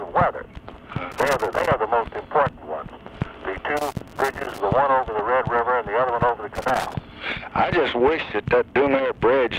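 Loose connector crackle breaks in at 1.12 to 1.68 s, 3.77 to 4.60 s and 6.55 to 6.94 s: a worn or dirty contact keeps making and breaking, chopping the signal into irregular bursts of scratchy crackle, the longest burst in the middle.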